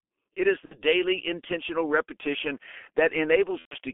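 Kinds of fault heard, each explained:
G.723.1 codec: heavy low-rate coding around 6.3 kbit/s on a 250 Hz to 3.4 kHz line, muffled and hoarse; spectrogram shows nothing above 3.4 kHz and smeared consonants.
VoIP packet loss concealed by the speech codec: at 0.65 s (just before "intentional repetition") and 3.59 s, about 60 and 120 ms lost, the decoder extends the last sound with fading gain; the waveform shows a smooth decaying envelope.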